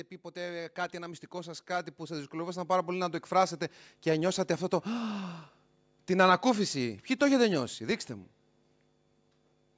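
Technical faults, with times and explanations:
0.33–3.24 s, automatic gain rising: the speech and background swell together by about 12 dB as the gain control, finding the input too quiet, steadily raises its gain.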